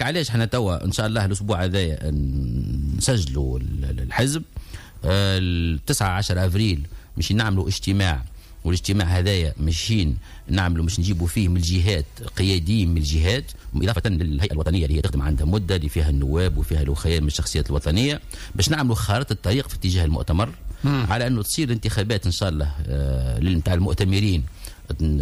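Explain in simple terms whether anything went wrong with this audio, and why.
From 13.45 to 15.17 s the sound suddenly rushes at about 1.77 times normal pace, unchanged in pitch: a time-stretched section, likely squeezed by software to fit.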